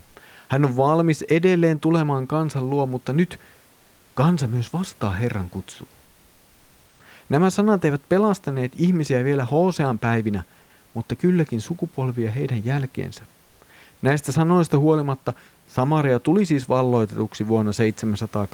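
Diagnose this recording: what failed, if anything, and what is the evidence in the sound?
Comfort noise in place of the background, from 0.03 to 0.15 s, a stretch of about 120 ms at the codec stage. The room noise, sitting about 38 dB below the speech, gives way briefly to a steady, featureless hiss at the same level before the real background returns. The likely cause is the codec's discontinuous transmission: the sender stopped sending during the pause, and the receiver synthesised shaped noise to fill it. On a spectrogram, the textured background turns into a smooth, uniform wash for that span, with no change in level on the waveform.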